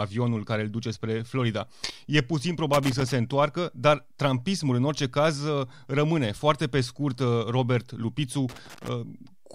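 A speech recording with loose connector crackle from 2.73 to 3.12 s, just before "întoarcă dar trampismul în", and from 8.49 to 8.89 s: irregular scratchy bursts from a contact making and breaking, unlike evenly spaced digital clicks.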